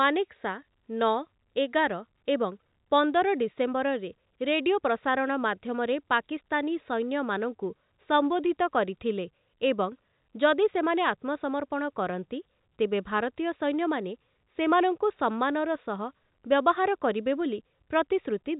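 No faults are audible in this speech; the band stops at about 3.8 kHz, as expected over G.711 telephone coding.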